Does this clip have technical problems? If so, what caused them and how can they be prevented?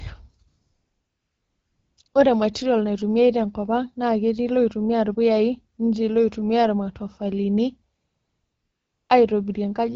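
Yes. The phone's voice activity detector judged the talker silent and stopped sending speech frames, so the receiver filled each gap with AMR comfort noise synthesised from a coarse level and spectrum estimate. This happens from 0.47 to 1.97 s, briefly at 2.03 s, and again from 2.07 to 2.13 s, all just before "ore material naitumiae te", and from 7.95 to 9.09 s. In those stretches the real background is swapped for a smooth, steady hiss that switches in and out, and the light coding of the AMR wideband (HD Voice) path, consistent with about 12.65 kbit/s, gives way to this synthetic fill. Disabling discontinuous transmission, or making the detector less aggressive, would keep real frames flowing through quiet passages.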